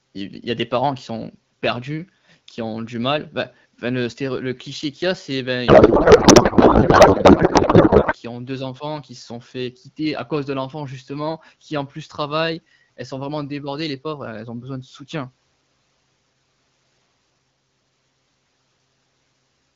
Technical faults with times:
5.67-8.14 codec payload misread

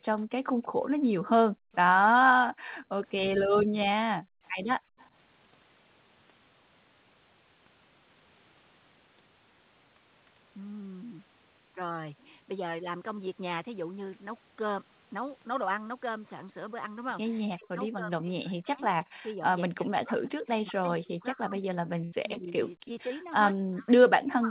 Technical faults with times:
1.52-1.72 background gated by the echo canceller
2.51-2.70 background gated by the echo canceller
3.64-4.98 background gated by the echo canceller
4.46-5.09 echo leak
17.44-24.50 speech suppressed in double talk
19.23-19.28 echo leak
22.04-22.14 burst of packet loss
22.34-22.38 short concealed packet loss
22.94-23.12 short concealed packet loss

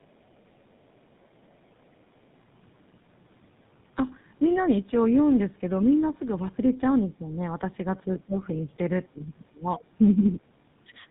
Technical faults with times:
0.00-11.11 tandem speech coding
7.02-7.29 speech suppressed in double talk
8.26-8.69 speech suppressed in double talk
9.14-9.21 speech suppressed in double talk
9.98-10.03 speech suppressed in double talk
11.05-11.11 speech suppressed in double talk

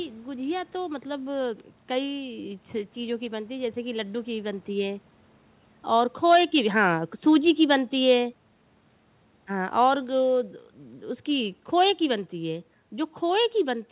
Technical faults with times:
1.60 bit error spike
5.88-8.32 automatic gain falling

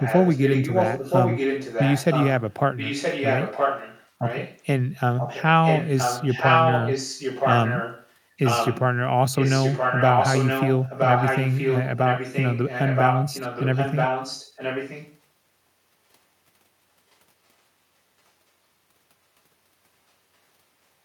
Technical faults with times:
0.00-4.65 echo leak
5.17-8.15 echo leak
8.43-8.81 echo leak
9.35-15.19 echo leak
17.11-17.16 echo leak

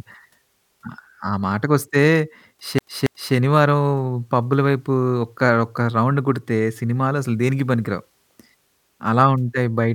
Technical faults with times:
2.78-3.34 CD stuck on one turn

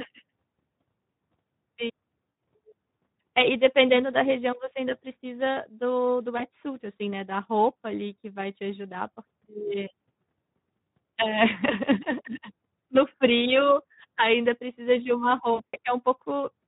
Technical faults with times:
0.00-16.68 Speex codec
2.29-2.37 VoIP packet loss concealed by the speech codec
6.37-6.45 VoIP packet loss concealed by the speech codec
15.53-15.78 VoIP packet loss concealed by the speech codec

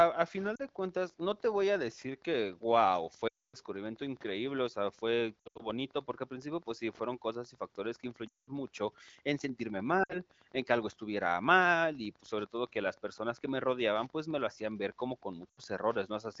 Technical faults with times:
0.00-16.40 Wi-Fi interference
0.55-0.62 lost AMR speech frames
3.27-3.56 lost AMR speech frames
5.40-5.67 lost AMR speech frames
8.28-8.49 lost AMR speech frames
10.03-10.19 lost AMR speech frames
15.50-15.61 lost AMR speech frames

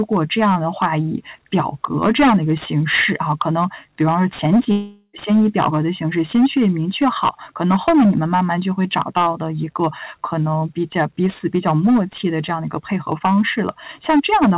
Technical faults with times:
0.00-14.57 hard clipping
4.72-5.15 long network dropout

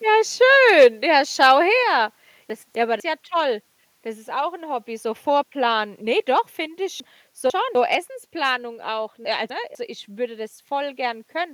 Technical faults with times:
0.68-0.86 microphone overload
0.84 microphone volume stepped down
1.42-1.52 microphone overload
1.83 microphone volume stepped down
2.50-3.00 chunks out of order
7.00-7.75 chunks out of order
9.25-9.75 chunks out of order

